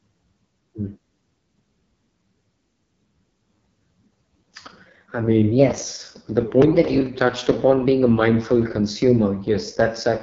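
Throughout, the speech has gone through an AMR wideband (HD Voice) codec at its lowest rate, which fits the 6.6 kbit/s mode. Starved of bits, its pulse-driven vocal model leaves the speech heavily rough and raspy, with nothing above 7.5 kHz.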